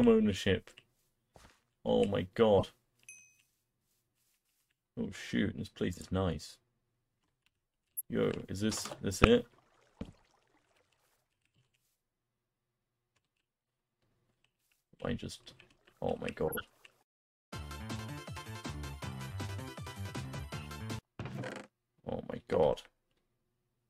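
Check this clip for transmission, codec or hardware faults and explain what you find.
Five brief chirps and bursts of noise cut through the audio, each a corrupt frame decoded. They occur at 2.58–2.63 s, 7.97–8.01 s, 9.24 s, 16.48–16.61 s and 22.54 s. The sharpest is the one at 9.24 s, peaking around -5 dBFS. The rest sit lower, between about -15 and -25 dBFS. The longest is at 16.48 s. Its length fits around seven damaged frames in a row, where the others span only a few. In each case, flipped bits in a compressed frame reached the decoder and were played rather than discarded. Misread gains and codes then put energy at the wrong frequencies for as long as the damaged frames lasted.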